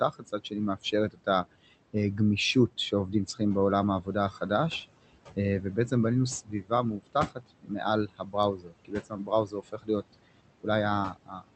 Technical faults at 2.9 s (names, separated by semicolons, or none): noise suppressor artifacts